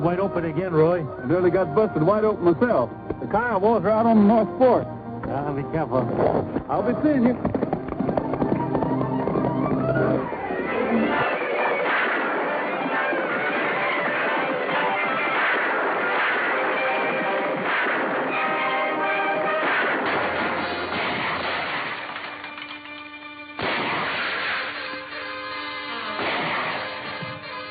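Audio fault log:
Nothing to log here: the audio comes through without any technical faults to point at.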